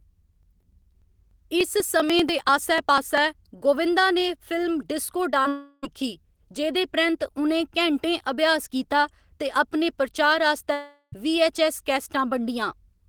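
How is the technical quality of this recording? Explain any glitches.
The recording has several transmission and interface glitches, concentrated in the first three seconds and in two later stretches.

Periodic USB or driver dropouts, 0.14 to 3.18 s: every 98 ms or so the interface skips a tiny slice of audio, around 2 ms, producing a steady train of ticks.

Short concealed packet loss, 5.31 to 5.35 s and 5.43 to 5.46 s: about 20 ms went missing each time, and the receiver extended the preceding sound, leaving a brief smear.

Long network dropout, likely the cause at 5.48 to 5.85 s and 10.73 to 11.14 s: roughly 0.3 to 0.4 s failed to arrive, so the receiver stretched the last sound into a fading buzz or hiss. The second gap ends in about 60 ms of silence before the audio returns, with that section lost.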